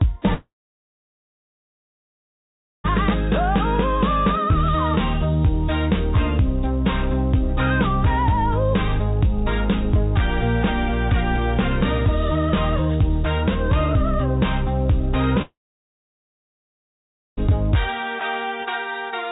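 At 0.34 s the sound breaks into a brief fading buzz and then about 2.4 s of near silence before resuming at 2.86 s. The same happens from 15.42 s to 17.51 s, with roughly 1.8 s of quiet. This is likely a long network dropout: about 2.5 s and 2 s of audio never arrived, the receiver stretched the last sound into a decaying fill, and playback resumed without the lost part. All of it sits within the 4 kHz band of the G.711 call path.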